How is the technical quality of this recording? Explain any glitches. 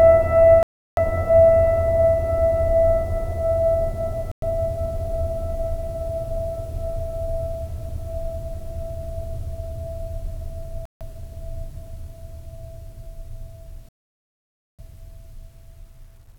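The music drops out four times. Each gap is a likely Bluetooth stall. Silence falls at 0.63 to 0.98 s, about 0.34 s long. It returns at 4.32 to 4.44 s for 0.11 s, at 10.85 to 11.02 s for 0.15 s, and at 13.89 to 14.80 s for 0.9 s. Radio interference held back packets. The headphone buffer emptied, so playback stopped dead. It resumed once the resent data arrived.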